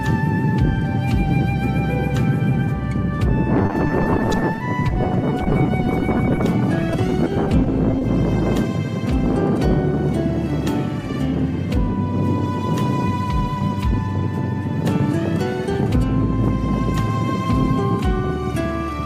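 From 3.62 to 6.45 s, and again from 6.81 to 8.04 s, repeated packet loss chops the sound into a robotic stutter. Dozens of gaps, none longer than 30 ms, are patched by repeating the last sound. This rapid cluster sets it apart from a single isolated dropout.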